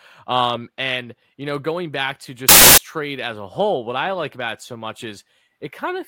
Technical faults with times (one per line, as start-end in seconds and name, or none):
2.49-2.78 samples built from the wrong bytes